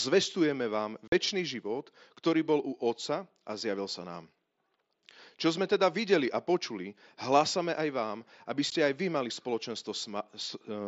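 At 1.08 to 1.12 s and again at 8.70 s, just before "aj vy mali", unconcealed Bluetooth headset packet loss leaves hard-edged silent holes of about 45 and 15 ms where headset packets vanished. Unlike concealed loss, nothing fills the gaps.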